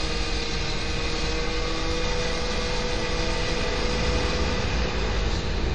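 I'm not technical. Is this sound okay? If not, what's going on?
No, not quite. All the way through, it sounds washy, with a ringing smear and a hiss that swells and fades along with the sound. Nothing comes through above about 10.5 kHz, so it's dull at the top. That's likely WMA compression, squeezed hard.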